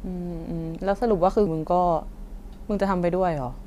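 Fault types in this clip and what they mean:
Damaged data in a compressed stream: At about 1.47 s a brief chirp or blip cuts into the speech. A short stretch of the compressed stream holds wrong bytes, so the decoder misreads the affected frame or cannot use it, loses its place in the data, and has to hunt for the next valid frame header. It plays out that broken moment as a short synthetic-sounding burst before resuming clean playback.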